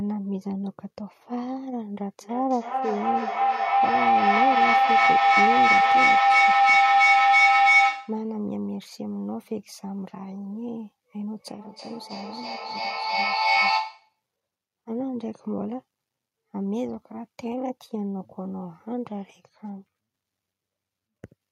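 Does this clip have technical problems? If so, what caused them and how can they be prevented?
Yes. From 2.21 to 8.33 s there is a feedback howl: two nearby devices loop sound back, building a tone near 700 Hz with a loop delay of about 0.3 s that reaches about 12 dB above the speech. It shows as a bright horizontal spectrogram line. Muting one device's microphone or speaker breaks the loop.

From 11.37 to 14.22 s there is feedback echo between two devices: the speech returns roughly every 0.3 s, and the repeats pile up to about 7 dB above the original. The waveform shows evenly spaced, stacked copies. Joining the call from only one device in the room prevents it.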